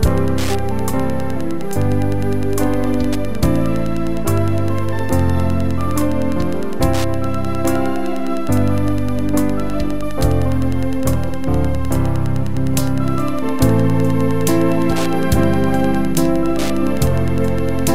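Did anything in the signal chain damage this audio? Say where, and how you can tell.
Yes. Wi-Fi interference runs through the whole clip, entering at the analogue wiring stage. A steady ticking sits underneath the sound from start to finish, repeating every 102.4 ms, roughly ten clicks a second, at a level somewhere around 25 dB below the wanted signal. That regular spacing matches a Wi-Fi access point's beacon interval. A nearby radio's bursts are being picked up by the analogue circuitry and rectified into audible pulses before the signal is converted.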